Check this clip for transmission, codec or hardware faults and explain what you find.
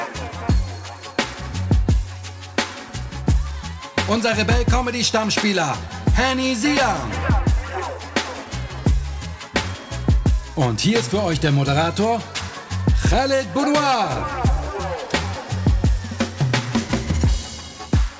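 Nothing stood out on listening; the audio simply carries the narrower band of a G.722 call path, with nothing above 8 kHz.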